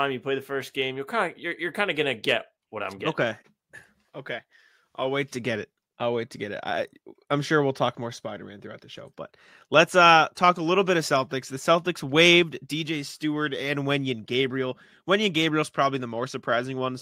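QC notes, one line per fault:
No faults were found in the speech. Nothing here calls for a QC entry.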